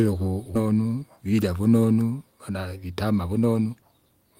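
A skip ahead occurs at about 0.55 s in this speech. Roughly 0.7 s of audio never reaches the listener: with later packets already queued, the stretch was dropped and the join closed up with no silence filling it. Playback leaps straight from one side of the hole to the other, so part of the utterance vanishes abruptly. The listener's delay shrinks by about the same amount.

Jitter buffer speed-up follows from 0.65 s to 1.33 s at 107% speed, then again from 2.39 s to 4.06 s at 112%. In both stretches the receiver was holding more audio than its target and trimmed it down by cutting many tiny pieces, each a pitch period or so long. Pitch stays put while the talker sounds rushed. The first pass removes around 50 ms, and the faster second pass removes around a fifth of a second.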